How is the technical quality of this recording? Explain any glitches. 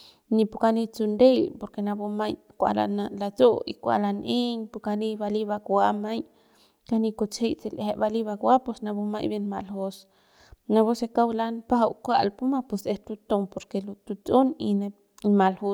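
No technical faults are audible anywhere in the speech recording, so there are no glitches to explain.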